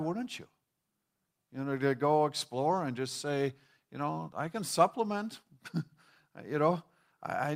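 No technical faults can be heard anywhere in the recording.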